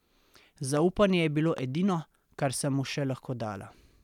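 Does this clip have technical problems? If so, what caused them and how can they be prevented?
Yes. Two loud pops sit on top of the speech, at 0.77 to 0.79 s and 1.58 to 1.60 s, peaking about 5 dB and about 10 dB above it. Each is likely a sudden voltage pulse from a plug, switch or static discharge. They appear as tall, narrow waveform spikes and thin full-height spectrogram stripes. Firm connections, no switching and static control during recording prevent them.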